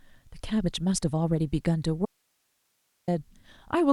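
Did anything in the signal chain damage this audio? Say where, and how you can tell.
Yes. At 2.06 s the speech cuts off abruptly, mid-flow rather than at a natural pause, and for about 1.02 s only a faint hiss remains, roughly 45 dB below the speech level, before the signal snaps back at 3.08 s. This is an audio dropout to a faint residue. The recording path after the break stayed live and kept passing its own noise, so the loss most likely happened upstream in the analogue wiring, at a momentarily open connection.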